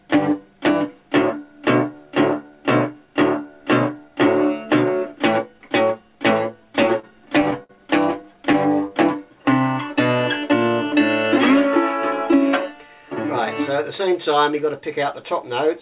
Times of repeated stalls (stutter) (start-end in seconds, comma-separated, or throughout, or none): 6.76-7.71, 8.11-8.55